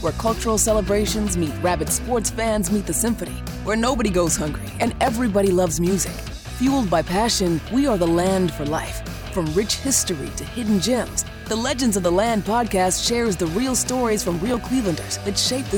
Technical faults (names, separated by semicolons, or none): processor overload crackle